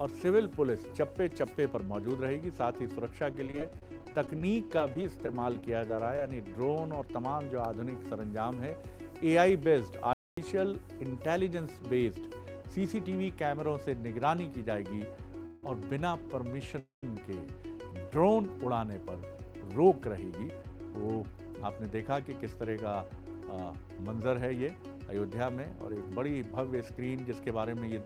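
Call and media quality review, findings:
Choppy, robotic audio from 3.32 to 6.21 s. Repeated packet loss, 25 short holes (longest 30 ms, about 10% of the stretch) each patched by extending the previous sound.

Sudden dropout to silence at 10.13 s for about 240 ms, then audio resumes. Playback stall, likely the player running out of data or its output thread blocking.

Brief buzzy smear at 15.46 to 15.64 s (170 ms), and again at 16.79 to 17.04 s (235 ms) fading to about 140 ms of silence. Call audio freeze, likely from delayed packets draining the jitter buffer. Receiver stretched the last sound, resumed in place, nothing lost, delay added.

Hurried, slightly rushed playback at unchanged pitch from 20.52 to 21.95 s (106% speed) and 26.73 to 27.96 s (108%). Jitter buffer speed-up, roughly a tenth of a second trimmed each time in pitch-period slices to cut accumulated delay.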